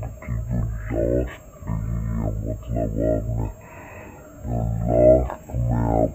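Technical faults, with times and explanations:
Throughout, stereo read as mono: alternating left and right samples are played back as one channel, so everything runs at half speed, an octave low, with a faint mirrored image higher up.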